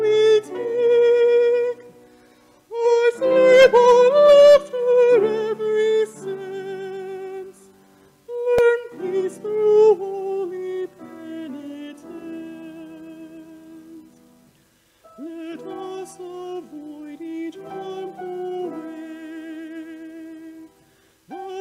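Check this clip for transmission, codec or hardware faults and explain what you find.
One transmission-side fault turns up: a repeated buffer at 8.58 s. A block of roughly 1.33 ms, which fits a 64-sample buffer, plays three times in a row because fresh audio did not reach the output in time and the device replayed what it already held. Being so short, it is heard as a brief click or tiny buzz rather than a stutter, and no audio appears to be missing. A waveform shows an identical short segment tiled with hard joins, and a spectrogram shows a thin vertical broadband line at that moment.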